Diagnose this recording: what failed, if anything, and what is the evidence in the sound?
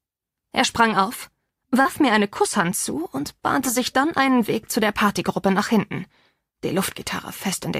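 A short concealed packet loss at the network stage, heard from 1.81 to 1.87 s as a brief smear. About 40 ms of audio arrived too late, and the receiver extrapolated the preceding sound for 36 ms before blending back. Unlike a buffer dropout, there is no silent gap or hard click.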